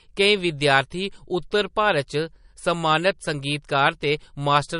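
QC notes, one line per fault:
Throughout, MP3 compression: plainly watery, swirly speech with nothing above 10.6 kHz, likely from a low-bitrate encode around 40 kbps starving high frequencies.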